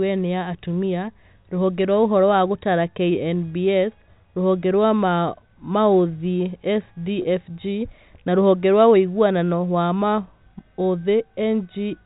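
At 7.22 s, running to 7.24 s, there is a brief packet loss with pitch repetition. About 20 ms of audio drops out, which fits a single lost packet. The receiver fills the gap by repeating the last pitch period it had. The loss is short, so it never fades to silence. It comes across as a slightly held, buzzy moment in the speech. This sits within the narrow telephone band of the G.711 coding, which cuts everything above 4 kHz.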